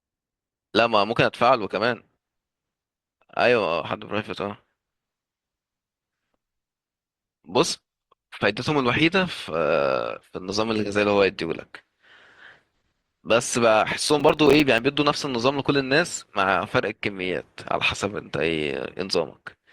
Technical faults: processor overload crackle

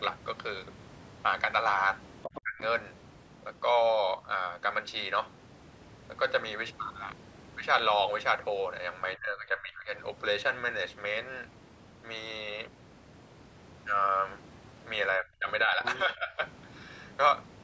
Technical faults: other side's voice leaking through; speech suppressed in double talk

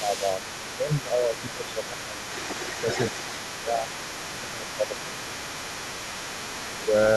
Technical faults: sample clock jitter; speech suppressed in double talk; other side's voice leaking through

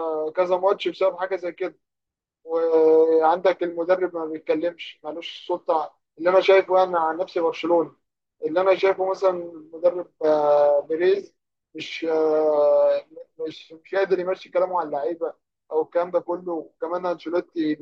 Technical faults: none

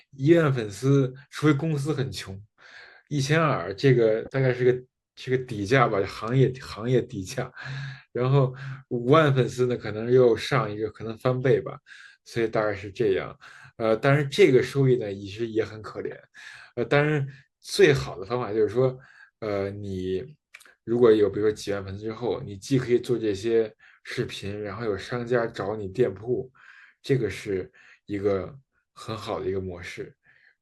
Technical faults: corrupt frame decoded

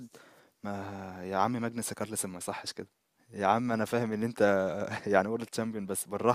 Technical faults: none

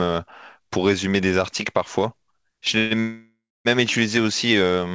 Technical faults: call audio freeze

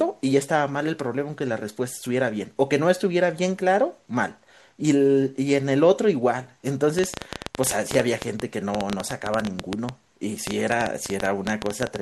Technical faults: train of clicks

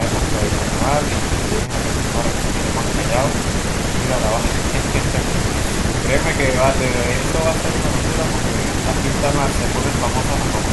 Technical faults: none

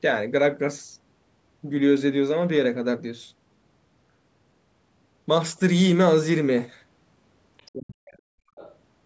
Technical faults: other side's voice leaking through; speech suppressed in double talk; background gated by the echo canceller

